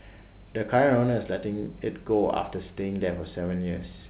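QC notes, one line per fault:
Nothing stood out on listening to this speech clip.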